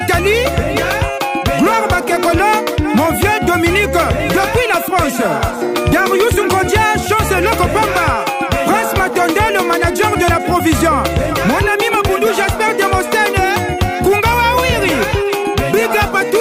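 Word clock ticks run through the sound from 0.36 s to 15.30 s, a sharp click roughly every 1.5 s, about ten in all, as an unlocked receiving clock drifting by about 15 ppm drops or repeats one sample. Each shows as a thin full-height vertical line on a spectrogram and a one-sample step in the waveform.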